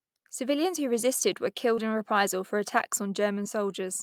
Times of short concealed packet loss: 1.75-1.79, 3.43-3.47

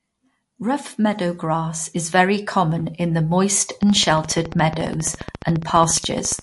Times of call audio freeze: none

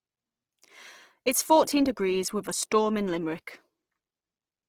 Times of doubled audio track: none

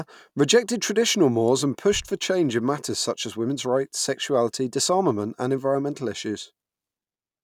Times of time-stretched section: none

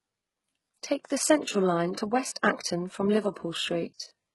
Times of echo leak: none

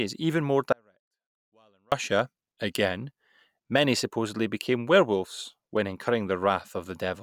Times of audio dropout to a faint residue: 0.72-1.92

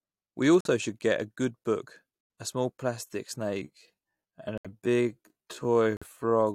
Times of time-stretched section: 3.55-6.54

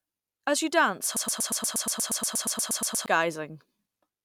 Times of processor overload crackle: none

